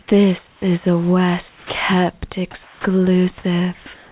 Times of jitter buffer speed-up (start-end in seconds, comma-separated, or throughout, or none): none